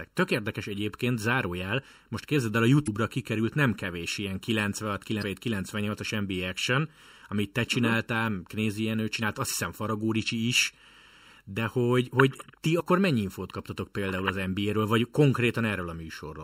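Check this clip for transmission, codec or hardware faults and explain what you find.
Two problems stand out: a constant hollowness from channel delay (comb filtering), and four short glitches from damaged data in a compressed stream.

The channel delay runs the whole length of the speech. One channel trails the other by something under a millisecond, and when they're folded to mono, frequencies that arrive out of step cancel. That cuts evenly spaced notches starting somewhere around 700 Hz, which hollows out the low mids and gives the voice that phasey character. It never moves, so it's a fixed offset rather than drift.

The damaged compressed data turns up at 2.84 to 2.88 s, 5.19 to 5.23 s, 9.19 to 9.23 s, and as a very brief hit at 12.79 s. Each is a quick glitch, roughly 40 ms for the first three. At those points the decoder hit frames it couldn't read properly, lost sync, and had to hunt for the next valid frame header, so you get garbage.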